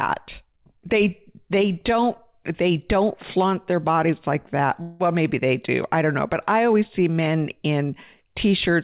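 Just after "their bodies like that", from 4.82 to 5.03 s, a call audio freeze fills 177 ms with a fading buzz or hiss, likely from late packets emptying the jitter buffer. Speech then resumes intact, slightly delayed.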